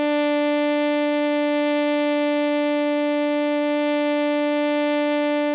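There are no technical faults to describe in this music, which reaches the listener over a WebRTC call path that leaves nothing above 4 kHz.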